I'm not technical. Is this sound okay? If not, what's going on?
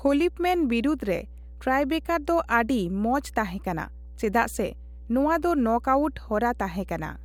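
No. There is mains hum throughout: a steady 60 Hz drone under the speech. Electrical interference from the power supply is leaking into the recording.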